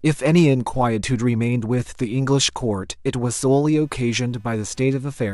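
From 3.69 s to the end, computer activity noise appears: a buzzy chirp at roughly 300 pulses per second, about 40 dB below the speech. Processor load disturbs the audio ground.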